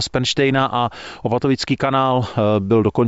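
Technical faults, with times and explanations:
No technical faults can be heard in this speech recording. Nothing in it calls for a time or an explanation.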